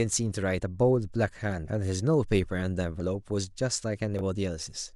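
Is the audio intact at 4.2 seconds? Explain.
No. A Bluetooth stutter occurs from 4.19 to 4.21 s. For about 20 ms, the wireless link failed to deliver fresh audio in time, which fits a single lost packet. The receiver filled the gap by replaying its most recent buffer. The result is a brief repeated slice of the speech, heard as a tiny glitch or catch. Afterward the speech picks up further along, as though it had kept playing through the dropout.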